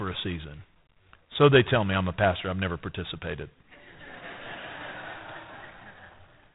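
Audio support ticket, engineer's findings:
Harsh rasping hiss riding speech level, whole clip; nothing above 3.8 kHz. G.726 ADPCM at 24 kbit/s, 3-bit prediction residual too coarse, quantisation noise tracks signal.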